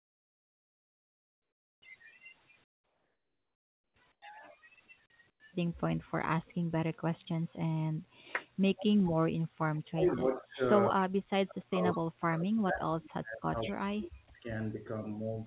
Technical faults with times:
0.00-1.82 comfort noise in place of the background
2.64-4.22 comfort noise in place of the background
5.30-5.40 comfort noise in place of the background
8.76-9.10 echo leak
9.70-10.61 speech suppressed in double talk
10.90-14.89 speech suppressed in double talk
11.93-11.98 echo leak
13.65-13.70 echo leak
14.28-14.30 sound dropped by the voice detector

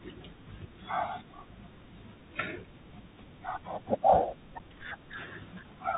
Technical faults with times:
0.00-5.97 Bluetooth CVSD headset codec
4.59 unconcealed Bluetooth headset packet loss

